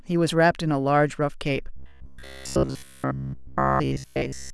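From 1.77 s to the end at 4.53 s, the speech turns into robotic sound from repeated short buffers: a rigid, metallic buzz near 66.9 Hz. This likely comes from a roughly 15 ms buffer being replayed to cover about 70% of the time while real audio is skipped. A spectrogram shows evenly spaced harmonic lines at 66.9 Hz multiples, and the waveform shows short identical segments tiled end to end.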